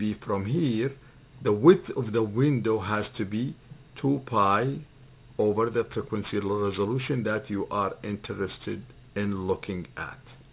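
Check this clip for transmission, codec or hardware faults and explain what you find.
One fault runs through the whole clip. Aliasing: the sound was brought down to a lower rate, which fits a drop from 48 kHz to 8 kHz, without a filter to remove content above the new 4 kHz limit. That content folds back below 4 kHz as unrelated, wrong-pitched tones, roughly 25 dB under the signal, giving a gritty, metallic edge and a spectrum that runs hard up to the band edge.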